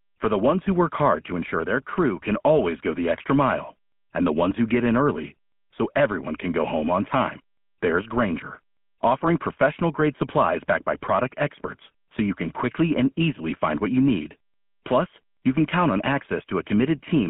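From start to finish the speech carries GSM full-rate codec damage. A vocal-tract model driven by regularly spaced pulses replaces the original excitation, giving a plainly audible buzzy, gravelly roughness. The band runs from 150 Hz to 3.4 kHz, and the coding fits roughly 13 kbps.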